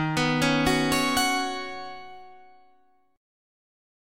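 No technical faults are audible.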